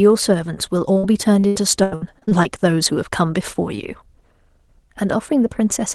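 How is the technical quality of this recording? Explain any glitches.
From 0.93 to 2.46 s the speech turns choppy and robotic, with pieces dropping out. This is repeated packet loss: ten gaps, the longest 83 ms, where lost or late packets were bridged by stretching the previous sound, so roughly 28% of that stretch is concealment. The call path's coding, which points to Opus at a modest call bitrate, leaves nothing above 12 kHz.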